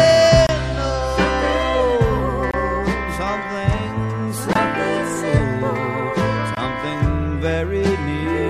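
There's a gap between stream segments showing up four times, at about 0.47, 2.51, 4.53 and 6.55 s, each a hard-edged hole of silence lasting roughly 18 to 25 ms. They land every 2 s or so, which points to 2-second segments whose time stamps don't quite line up, so the player pads each seam with silence. Nothing's actually missing from the audio; it just gets pushed later at each join.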